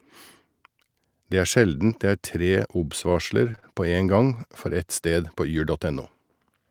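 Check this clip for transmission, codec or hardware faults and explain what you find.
Repeated packet loss (robotic sound) runs from 3.09 to 3.64 s: six gaps in quick succession, each patched by extending the previous sound, about 106 ms filled in total. The speech turns choppy and robotic, losing about 40 ms outright, with the longest hole 27 ms.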